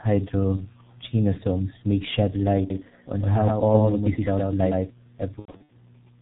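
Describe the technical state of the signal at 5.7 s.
At 5.7 s the speech sits near the end of VoIP packet loss concealed by the speech codec, spanning 5.39 to 5.72 s. About 210 ms of audio is missing across 300 ms, in gaps up to 90 ms. The decoder fills them from its last pitch and filter, so the voice turns into a fading buzz or coloured noise and stays weak. The whole clip also carries heavy G.723.1 codec damage, which fits a 6.3 kbit/s stream. Nothing passes above 4 kHz. The voice sounds muffled and hoarse, with blurred consonants.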